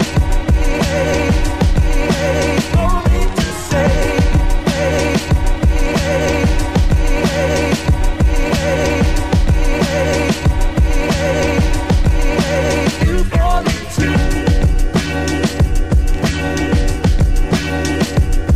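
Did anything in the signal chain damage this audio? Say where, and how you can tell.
Yes. A fine hiss and grainy roughness rides on the sound for the whole clip. It swells on loud passages and bright, high-frequency content, and it drops away whenever the sound goes quiet. That points to sample clock jitter at the converter. Its clock wanders by a few microseconds, so each sample is taken slightly early or late. Where the waveform moves fast, that timing error becomes an amplitude error, here about 30 dB below the signal.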